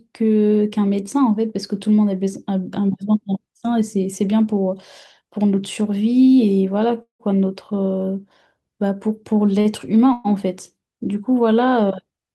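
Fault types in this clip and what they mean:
Call audio freeze: The speech halts twice and the last sound is carried on as a fading buzz. At 7.02 s it dies away into about 120 ms of silence before the audio resumes near 7.21 s, roughly 0.17 s later. At 10.13 s a shorter, 0.12 s buzz fades without reaching silence. Nothing seems lost, and the speech picks up where it stopped. The likely cause is packets delayed in transit, emptying the jitter buffer until they arrived.
Short stall from a late packet: At 9.61 s a sound is held too long, about 38 ms, with a slight buzz or dip, and then the speech carries on from the same point without anything missing. One packet was not there when playback needed it, so the jitter buffer ran dry for a moment. The receiver stretched what it already had until the packet came in, which adds a tiny delay.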